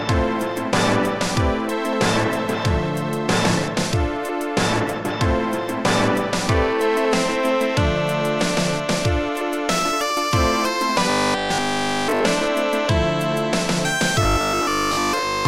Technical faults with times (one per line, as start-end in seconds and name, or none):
11.10-12.24 robotic sound from repeated short buffers
14.23-15.47 robotic sound from repeated short buffers